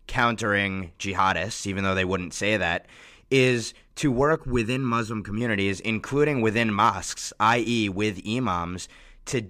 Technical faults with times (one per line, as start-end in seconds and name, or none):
4.36-5.41 channel delay (comb filtering)